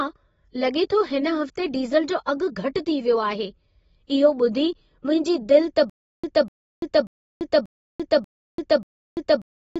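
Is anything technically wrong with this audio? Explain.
Yes. Throughout, the audio is dull and smeared with a fizzy texture. It is likely from AAC compression at a low bitrate, around 24 kbps, which cut everything above 7.6 kHz.

From 5.90 s to the end, there is a stutter with silent gaps. A playback stall likely repeated a 247 ms fragment six times, every 587 ms, separated by 340 ms of digital silence.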